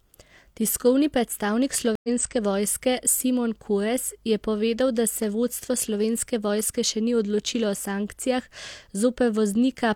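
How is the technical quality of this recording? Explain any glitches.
The recording has one glitch, a stream reconnect. At 1.95 s the speech drops out for 83 ms, ending by 2.09 s. The connection broke and a fresh decoder restarted mid-stream, so playback resumes roughly 50 ms later than where it stopped, leaving a short gap and a small skip in the speech.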